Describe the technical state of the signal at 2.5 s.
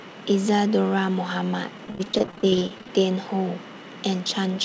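At 2.5 s the signal sits inside a stretch of repeated packet loss (robotic sound) running from 1.78 to 2.89 s. Twenty-five short dropouts, none longer than 19 ms, are each patched by extending the preceding sound, so about 23% of the span is concealed. The result is choppy speech with fragments missing. Beneath it, nothing is present above 8 kHz, which fits a wideband G.722 call path.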